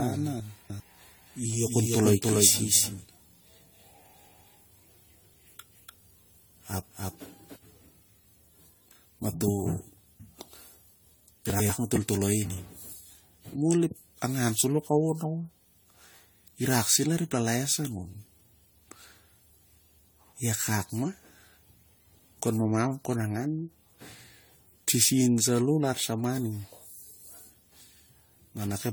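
Across the whole speech clip the sound is swirly, smeared and hollow, with softened consonant attacks and a fluttery, watery texture that is worse than a single lossy encode would produce. This points to generation loss, the likely result of repeated decode and re-encode passes, roughly seven, through a codec consistent with AAC-LC at around 64 kbit/s. Each pass requantises on a shifted frame grid, so noise and spectral gaps build up.

From the very start until 7.56 s a doubled audio track is present, already running when the clip opens. A second full-band copy trails the original by roughly 300 ms at about the same level. It is dry, with no decay or room colour, so it sounds like a hard echo rather than reverberation. The likely cause is a second capture through a slower path, or an edit holding two out-of-step copies. At 7.56 s the copy stops abruptly.

Between 0.4 and 0.8 s, inside that doubled section, the chunks are out of order. 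A 100 ms block plays three blocks later than it should, so the sound briefly jumbles at the hard joins where the sequence breaks and resumes. Nothing is missing, only misordered.

At 11.5 to 11.7 s there is a second, shorter case of chunks out of order. A 100 ms block arrives one position late, giving a quick garbled stutter.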